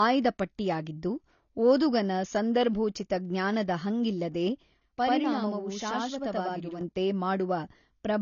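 It's a speech clip, and all the way through it has the dull, smeared sound of lossy coding, with nothing above 7 kHz and plainly audible damage, likely AAC compression at a low bitrate, something like 24 kbps. Then from 4.81 to 6.81 s there's channel delay (doubling): one channel runs about 85 ms late, which fits a 4096-sample buffer, and once it's folded to mono you hear a second copy trailing right behind as a doubled slap.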